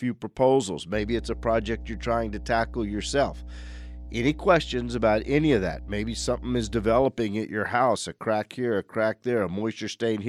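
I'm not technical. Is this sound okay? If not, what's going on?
No. From about 0.95 to 7.03 seconds, a steady low buzz sits fairly loudly under the speech, ending just before "at your house a". This is mains hum: the 60 Hz electrical supply leaking into the recording, probably through a ground loop or a nearby transformer.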